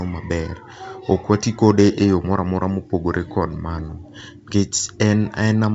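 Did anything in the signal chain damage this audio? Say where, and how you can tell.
No, nothing in the signal chain damaged this audio; the G.722 wideband telephone coding at 64 kbit/s simply leaves nothing above about 7.8 kHz, as that codec is designed to.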